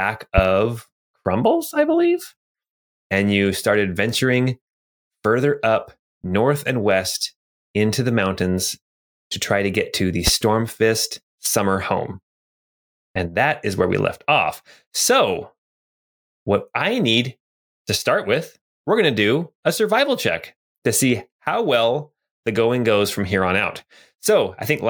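At 0.38 s and again at 10.27 s, right after "to get to the", there's a loud pop, a single sharp thump lasting about 30 ms and standing well above the speech, which carries straight on underneath. It's likely a brief voltage spike from a switch, plug or static.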